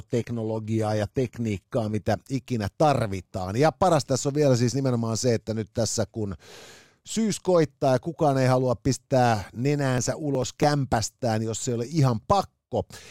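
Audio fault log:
0.0–2.0 s adaptive stream starting at a low bitrate: dull, synthetic treble, which fits a low-bitrate HE-AAC start, then a sudden gapless lift in clarity before "ikinä tarvitaan", unlike a dropout.
9.98–10.63 s processor overload crackle: after "kukaan ei halua pistää", about ten tiny skipped buffers of roughly 1.5 ms make gritty tearing, finer and denser than packet-loss gaps.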